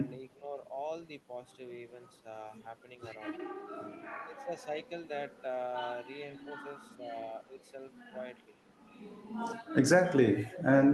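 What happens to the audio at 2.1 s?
Nothing goes wrong at 2.1 s: the speech there plays through intact, with only the steady band-limited character of the Opus call path, whose bandwidth stops at around 12 kHz.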